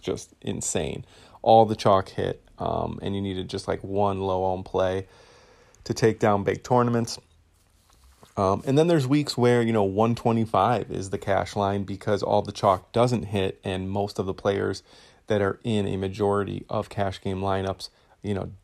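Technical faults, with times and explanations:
Nothing to flag here, as no technical faults turn up anywhere in this speech recording.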